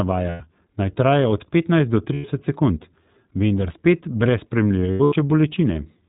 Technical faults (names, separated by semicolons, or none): iLBC codec; lost iLBC frames